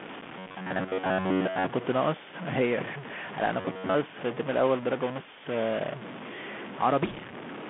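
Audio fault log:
throughout: stuck bit. A distortion rides on the speech, and the pauses are not silent but filled with a gritty noise. This is likely one data bit held at a fixed value, so about half the samples are pushed off by that bit's weight.
throughout: Bluetooth CVSD headset codec. The speech sounds narrow and boxy, confined to roughly 150 Hz to 3.5 kHz, with scratchy s sounds and a granular hiss underneath. The damage is plainly audible, typical of a one-bit-per-sample delta coder at 64 kbps whose adaptive step cannot keep up with loud high content.
0.39–1.71 s and 3.61–3.96 s: robotic sound from repeated short buffers. The voice turns into a rigid metallic buzz at about 93.8 Hz that still roughly tracks the speech. The likely cause is audio arriving too seldom, so a short stretch of about 10.7 ms is replayed over and over, covering most of each span while the real audio is skipped.
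7.05–7.19 s: bit errors on a Bluetooth voice link. A brief rushing, crackly noise rises over the speech without any sharp clicks. Flipped bits on the headset link, at an error rate of roughly 2 percent, each disturb the decoded waveform in proportion to the speech level, and those errors die away rather than building to loud pops.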